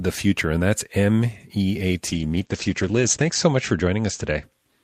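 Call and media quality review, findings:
Call bitrate drop, 2.09 to 4.49 s: speech turns rough and muffled, coarsest for about 1.33 s. Encoder side. Spectrogram shows the top band cut from 20 kHz to 8 kHz, consistent with a fall from about 40 to 12 kbps.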